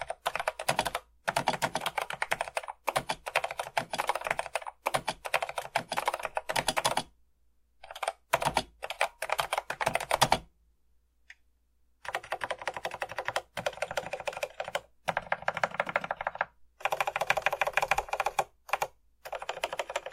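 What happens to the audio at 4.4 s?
At 4.30 s a stream segment is repeated: the player queued the same chunk of audio twice, so roughly 1.98 s of sound replays through 6.29 s. A brief blip marks the jump back, and the programme then continues from the duplicated point.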